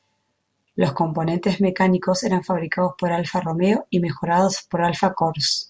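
No technical fault can be heard anywhere in this speech recording. The audio continues without interruption throughout.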